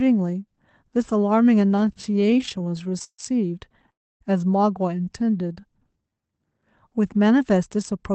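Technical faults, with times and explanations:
1.71–3.20 s and 3.72–3.90 s, repeated stalls (stutter): The speech keeps catching and restarting. In the first span about two dozen small holds add roughly 0.41 s, the longest 145 ms. That is 28% of the span. The second span has four brief holds adding about 35 ms, the longest 11 ms. Packets arrived late, so the jitter buffer kept running dry. Each time the receiver stretched the last sound until data came. Nothing is lost, but the flow drags.
3.92–4.22 s, call audio freeze: The speech stops dead for about 0.29 s. Almost all of that is silence. Then it resumes exactly where it left off. Packets were likely held up in transit, which emptied the jitter buffer. The receiver carried the last sound briefly and then let it fall silent. The wait inserts a gap and adds that much delay from here on. No speech goes missing.
5.05–6.40 s, jitter buffer slow-down: This stretch plays at about 85% speed with the pitch unchanged. 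About 206 ms is added. Sounds are drawn out. The buffer was building a reserve. It did so by repeating single pitch periods and bits of pauses many times over. This lengthens the audio without lowering it. Through all of this the Opus call path cuts the top end off at 8 kHz, which fits a low bitrate around 20 kbps.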